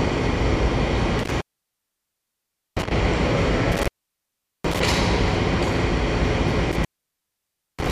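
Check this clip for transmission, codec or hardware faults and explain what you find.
There's one hardware fault here: an intermittent contact, at 1.19–2.91 s, 3.72–4.80 s and 6.72–7.91 s. A loose plug or cable briefly opens, so the sound crackles and drops to faint hiss for about 1.35 s, 0.77 s and 0.94 s.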